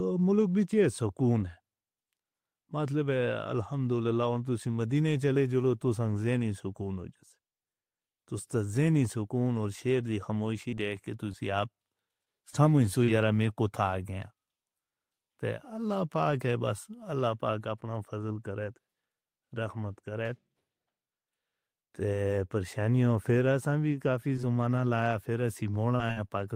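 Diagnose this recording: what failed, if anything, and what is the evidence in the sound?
The network stage failed, producing scattered short gaps in this speech between 10.54 and 13.52 s and again between 24.36 and 26.35 s. About seven brief hiccups sit in each span, none longer than roughly 40 ms, because lost packets were covered by extending the preceding sound.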